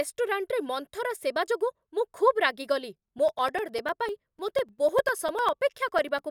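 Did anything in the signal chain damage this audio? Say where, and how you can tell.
Yes. At the driver or buffer stage, something blocks the USB bus or audio driver on a fixed 0.1 s cycle, from about 2.98 s to 6.19 s. Each stall drops a few milliseconds of samples and fills the gap with silence, roughly thirty times. These are periodic USB or driver dropouts. In the speech they sound like a steady train of ticks, ten per second, and the clockwork regularity points to a scheduled background task rather than random interference.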